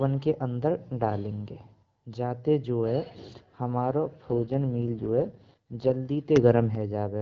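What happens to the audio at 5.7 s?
At 5.7 s an AMR rate drop is under way, from 4.30 to 5.92 s. The codec falls to a lower rate, which fits 6.6 kbit/s. Speech turns rough and synthetic.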